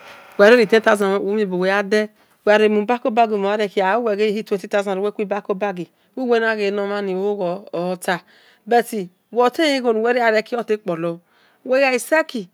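From 0.42 to 0.53 s and again at 0.87 to 0.89 s, microphone overload flattens the speech peaks, likely from input gain set too high. It adds a harsh crackle roughly 4 dB and 2 dB past the converter's limit. At 1.02 s the microphone volume steps down by about 4 dB, likely the call software's automatic gain reacting to the clipping. Speech and background drop together.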